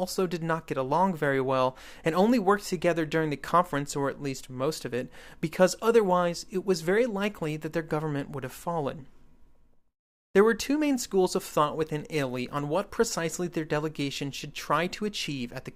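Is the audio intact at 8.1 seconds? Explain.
Yes, the speech at 8.1 seconds plays through cleanly, with no dropout, click, distortion or other fault at that moment.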